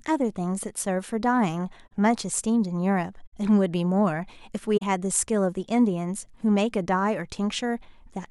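Corrupt frame concealment at 1.86–1.92 s, 3.27–3.34 s and 4.77–4.83 s: the decoder caught damaged frames and covered them. Each shows as a brief faded or smeared band on the spectrogram.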